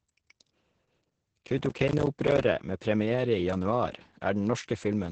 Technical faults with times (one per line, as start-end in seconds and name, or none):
0.00-5.12 Opus voice compression
1.45-2.44 processor overload crackle